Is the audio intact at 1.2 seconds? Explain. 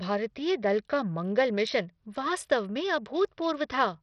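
No, at 1.2 seconds, like the whole clip, the speech has heavy damage from what's likely Bluetooth SBC compression. Starved top sub-bands leave gritty treble and nothing above 12 kHz.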